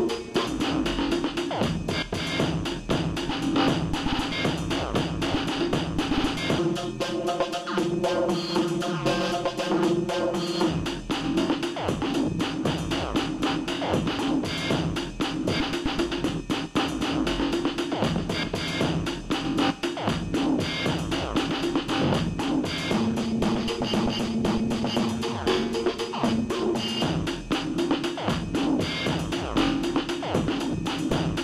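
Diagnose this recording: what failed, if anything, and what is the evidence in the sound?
Nothing failed in this recording of everyday sounds. No stage of the chain, from capture through to playback, leaves any audible evidence of a problem.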